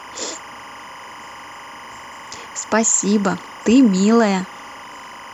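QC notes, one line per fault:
Throughout, timecode bleed: linear timecode running at 25 frames per second has leaked into the speech path from a neighbouring track or cable. Its square-wave code flips between two tones near 1 kHz and 2 kHz as the bits change, and that constant switching reaches the ear as a steady chirping, buzzy warble sitting behind the speech, roughly 20 dB below it, never pausing between phrases.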